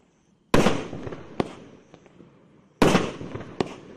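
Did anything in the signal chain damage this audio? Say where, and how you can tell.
Yes. MP2 compression, throughout the clip, points to the codec stage. The sound is dull with a gurgling, granular edge, which fits a rate around 80 kbps. Too few bits means the encoder switches off upper sub-bands and coarsely quantises the rest, likely an MP2 encoder.

DAB burbling appears from 0.64 to 1.21 s and again from 3.25 to 3.73 s, a reception fault. Short blips of noise appear where bit errors, a fraction of a percent, slip past error correction and corrupt samples and scale factors, so individual sub-bands jump in level frame by frame. The first burst sounds heavier.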